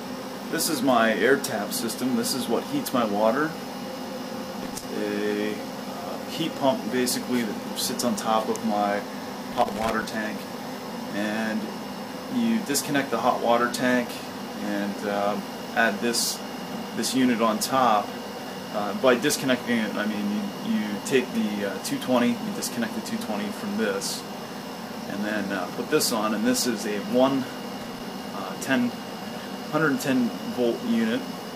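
Three short bursts of loose connector crackle break up the sound, from 4.62 to 4.83 s, from 9.52 to 10.02 s, and from 27.81 to 28.00 s. Each is an irregular scratching crackle lasting between roughly 0.2 and 0.5 s, the longest being the middle one. A worn or dirty contact is opening and closing as it shifts, chopping the signal on and off in quick succession.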